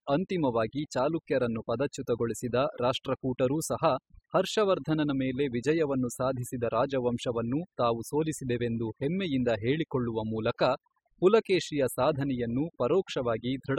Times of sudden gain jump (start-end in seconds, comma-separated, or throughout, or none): none